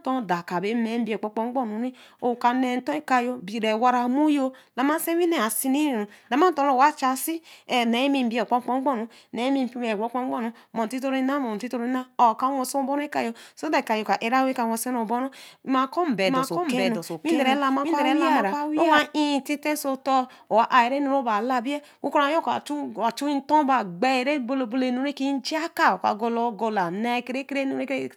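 Speech, with a doubled audio track from 16.25 to 18.99 s. A second full-band copy trails the original by roughly 0.7 s, about 5 dB quieter. It carries no room colour and cuts in and out abruptly. Likely a second capture path or out-of-step edit.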